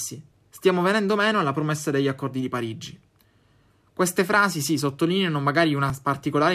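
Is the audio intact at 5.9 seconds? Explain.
No. At 5.9 s the speech jumps forward slightly, skipping roughly 10 ms with no gap of silence. This is likely a dropped buffer (overrun): the samples were overwritten before being read, and the two sides were spliced directly together.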